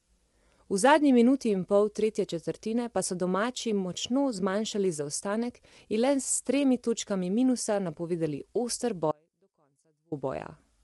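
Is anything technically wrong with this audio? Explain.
Yes, there are two faults in this speech.

Throughout, the speech likely passed through low-delay AAC compression, AAC-ELD. Its short frames resolve pitch harmonics poorly, and at a bitrate that sounds like around 32 kbps the damage is plainly audible: rough, grainy voice with noise between harmonics and nothing above 11.6 kHz.

From 9.12 to 10.12 s, just after "točkami minusa napovedali oster", there is an audio dropout to a faint residue, likely from the signal being lost while the path stayed live. For about 1.0 s the speech cuts abruptly to a faint sound, roughly 35 dB down, before returning.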